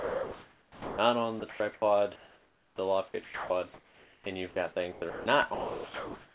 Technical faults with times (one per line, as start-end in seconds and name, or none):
0.00-0.98 sound dropped by the voice detector
1.40-1.82 sound chopped by the voice detector
2.16-2.78 comfort noise in place of the background
3.08-4.26 sound chopped by the voice detector
4.92-5.26 sound chopped by the voice detector
5.54-6.35 sound dropped by the voice detector